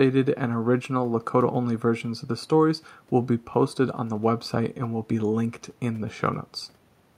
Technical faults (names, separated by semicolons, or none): none